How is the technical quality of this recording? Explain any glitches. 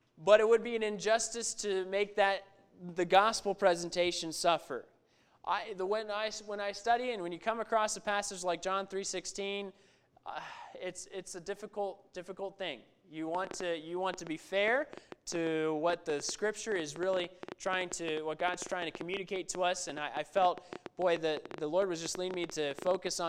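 The recording has one clear fault: a train of clicks over the last ten seconds. From 13.35 s to 23.08 s, a ticking or popping runs over the sound and through the pauses, at about 8.3 clicks per second but unevenly spaced, around seventy in all, with peaks about 10 dB above the audio. The clicks share one shape, pointing to an outside pulse, likely interference from nearby equipment or a faulty connection or power supply.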